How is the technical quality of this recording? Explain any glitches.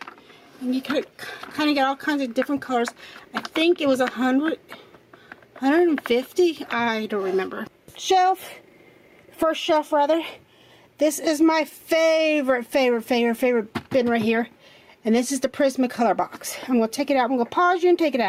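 The recording suffers from gain pumping throughout. The gain swings by around 10 dB, pulled down under each loud sound. The likely cause is input gain set far too high, with a fast limiter clamping down on peaks. Everything sounds squashed.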